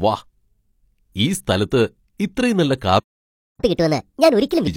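At 2.99 s, just after "ഇത്രയും നല്ല", the speech cuts out in mid-flow and the output stays silent until 3.60 s, a gap of about 0.59 s. This is a playback stall: the player likely ran out of buffered data or had its output thread blocked, so nothing reached the output until it recovered. To the ear it is an abrupt hole in the speech.

From 3.60 s to 4.67 s the player performs a catch-up at higher speed, resampling its backlog to play it 1.5 times faster than normal. Because this is resampling rather than time-stretching, pitch rises along with speed, by roughly seven semitones. The speech in that stretch sounds hurried and noticeably higher, with a chipmunk-like quality, as the player works to recover the time lost in the stall.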